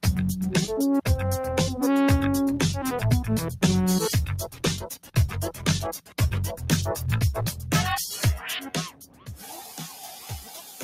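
From the start, there's a noise suppressor applied to music or sounds, which means a speech-tuned denoiser is treating steady, sustained material as noise to be removed. The gain keeps swinging by around 10 dB over the whole clip. Onsets get through, but anything held or decaying gets pulled down, so the sound pumps and thins out, and its tails die early instead of ringing naturally.

On top of that steady pumping, there are five spots where the sound is cut by the noise suppressor more heavily. The first runs from 4.47 to 5.36 s and drops by up to about 12 dB over most of that stretch. Shorter dips follow at 5.52 to 5.67 s (about 9 dB), 5.99 to 6.2 s (about 12 dB), and 7.52 to 7.71 s (about 7 dB). The last runs from 8.9 to 9.36 s and drops by about 12 dB for roughly half a second. In each case the sustained part sinks or gets chopped short.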